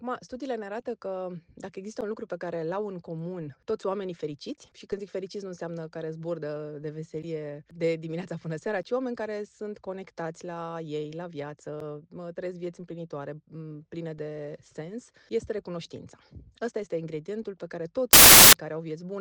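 Samples built from the wrong bytes appear from 18.13 to 18.53 s. Here the reader assembles each sample's bytes out of order or misaligned, so the rapidly changing low bits take over as the dominant part of each value, producing a burst of loud, harsh broadband noise.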